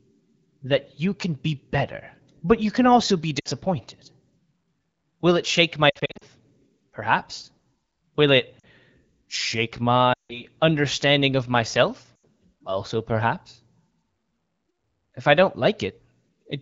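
Lost AMR speech frames: radio errors corrupt frames, and the wideband decoder fills each gap by repeating the last good pitch and vocal tract settings at falling gain. Brief drops to near silence follow "you can also be" at 3.39–3.48 s and appear at 8.59–8.66 s and 12.16–12.25 s. Scattered losses at 5.89–6.24 s, after "it shake my", leave a choppy, faltering stretch. A gap that drops to near silence at 10.13–10.44 s precedes "understanding of myself".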